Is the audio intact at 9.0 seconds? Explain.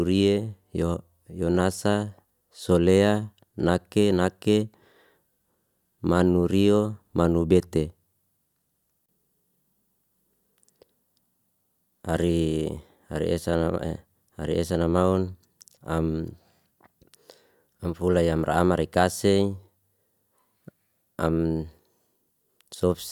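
Yes, at 9.0 seconds the speech plays through intact, with no dropout, click, distortion or other fault at that point.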